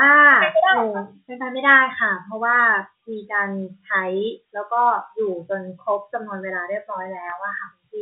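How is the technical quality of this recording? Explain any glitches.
One glitch stands out, near the end of the clip, heard through the narrowband sound of G.711 telephone coding, which cuts everything above 4 kHz.

From 7.30 to 7.32 s there is a packet loss with pitch repetition. About 20 ms of audio went missing, which fits two lost packets. The receiver filled the hole by repeating the last pitch period it had, fading that copy out before the real signal resumed. Because the gap is so short, it comes across as a brief, slightly held, buzzy sustain.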